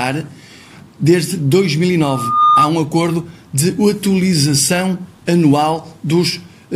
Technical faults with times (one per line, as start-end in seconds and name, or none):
2.00-2.70 loudspeaker feedback squeal